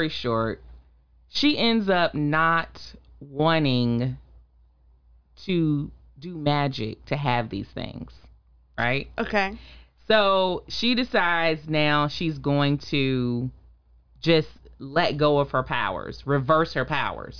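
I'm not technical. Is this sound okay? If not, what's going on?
Yes, nothing stood out as a problem while listening to this speech recording.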